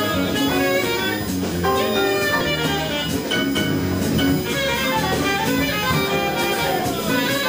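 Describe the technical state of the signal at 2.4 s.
At 2.4 s there is USB whine, as throughout the clip. The bus draws current in 1 ms frames, which leaks in through power or ground. It sounds as a fixed-pitch tone on 1 kHz, strongest at 15 kHz, roughly 15 dB below the signal.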